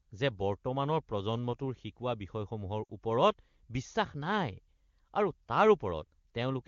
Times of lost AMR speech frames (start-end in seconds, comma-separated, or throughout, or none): 2.84-2.92